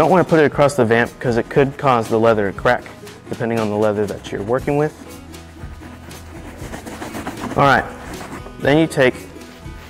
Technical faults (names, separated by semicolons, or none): hard clipping